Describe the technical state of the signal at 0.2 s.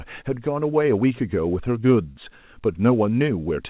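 At 0.2 s the signal is intact, with no fault, and the speech passes through the call path's narrowband coding as expected, with nothing above 4 kHz.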